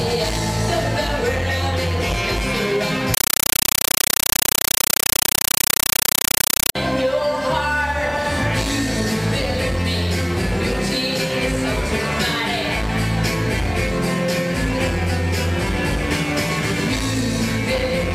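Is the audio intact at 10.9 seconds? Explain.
Yes, the audio is intact at 10.9 seconds, with no dropout, click, distortion or other fault audible at that moment.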